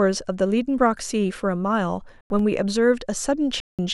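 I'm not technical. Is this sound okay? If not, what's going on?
No. The speech drops abruptly into silence twice, from 2.21 to 2.39 s and from 3.60 to 3.79 s. Each gap is a corrupt frame muted: damaged chunks of the compressed audio, about two per gap, were rejected by the decoder and replaced with silence.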